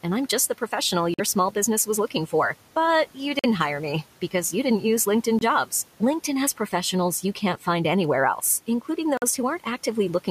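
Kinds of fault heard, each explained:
Bluetooth dropout: four short silences, the first right after "I'm just the professional", likely from late packets being dropped before reaching the headphones.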